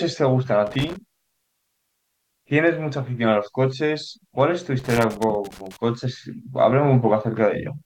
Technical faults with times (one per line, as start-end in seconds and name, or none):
0.66-0.96 loose connector crackle
4.79-5.77 loose connector crackle